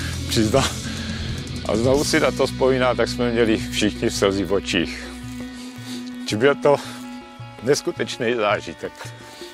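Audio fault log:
Nothing to log here; I listened all the way through and didn't catch a single problem with this one.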